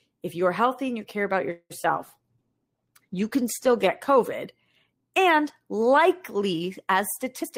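Just after "and you care about", at 1.51 s, packets were likely held up in transit and the jitter buffer ran dry. This is a call audio freeze. The receiver stretched the last sound into a fading buzz or hiss that drops to about 40 ms of silence. When the packets arrive at 1.72 s, the speech resumes where it stopped. Nothing is lost, but the pause adds about 187 ms of delay to everything that follows.

At 1.82 to 1.86 s comes a short concealed packet loss. About 20 ms of audio never reached the decoder, and the receiver covered the hole by carrying the previous sound forward before blending back into real audio. The patch is only a few hundredths of a second long, so it comes across as a small smear or wobble.

From 2.01 s to 4.07 s there is a call bitrate drop. The bandwidth estimate fell, and the encoder was told to go from 32 kbps to 16 kbps. It stayed at that low rate for nearly 2 s. 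With half the bits, Opus codes the speech more coarsely and trims the top of the spectrum. The speech turns rough and somewhat muffled until the rate recovers near 4.1 s.

Right at the end, from 7.42 s to 7.57 s, a jitter buffer speed-up takes place. The buffer was holding more audio than its target, so the receiver trimmed short pitch-period pieces in quick succession to shed the excess, roughly 50 ms in total. The speech runs at about 126 % of normal speed with unchanged pitch, so the final syllables sound hurried.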